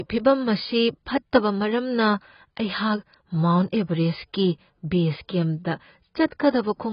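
AAC compression runs through the whole speech clip: nothing sounds above about 5.1 kHz, and the remaining band is dull and smeared, with a warbling, fizzy texture on sibilants and held sounds. The damage is heavy, likely from AAC-LC at a very low bitrate, which fits something around 16 kbps. At that rate the encoder has too few bits to code the upper spectrum, so it drops everything above the cut-off and quantises what is left coarsely, leaving gaps that shift from frame to frame.

Pre-echo appears from 6.30 to 6.32 s, a smear of about 24 ms just ahead of a sharp attack. The transform codec spreads its quantisation noise evenly across a whole block, so when an onset lands late in a block, noise scaled for that loud moment also spills into the quiet stretch before it. The result is a short hiss arriving just before the attack, which itself sounds softened rather than crisp.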